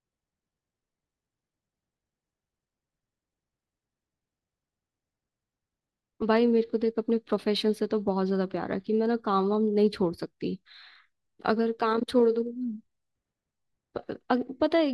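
Speech, and there's a block size mismatch (truncated) running the whole way through. You get a steady buzz at about 46.9 Hz, which is the block rate, and that fits one stage writing 1024-sample blocks at 48 kHz while the next stage reads fewer and drops the tail of each one. The chopped ends are what make the buzz. Pacing stays at normal speed, and the pitch sits where it should.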